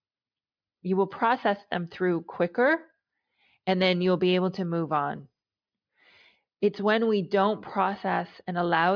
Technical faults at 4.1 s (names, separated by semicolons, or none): none